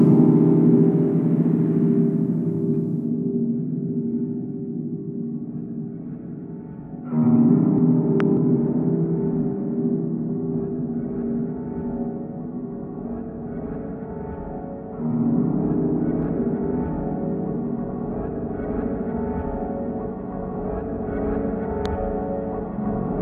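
At 8.20 to 8.22 s a loud pop cuts in, a single sharp thump standing about 15 dB above the surrounding sound, which carries on beneath it. A second loud pop follows at 21.86 to 21.88 s, softer at about 10 dB above. Each is likely a brief voltage step, such as a switch or static discharge, shaped by the downstream circuitry. On the waveform each shows as a tall, narrow spike; on a spectrogram, a thin full-height vertical stripe.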